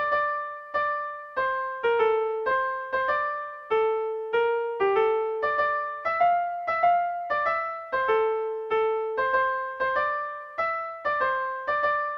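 A jump at 2.51 s skips roughly 150 ms: compressed frames skipped, likely a few 32 ms frames the decoder dropped.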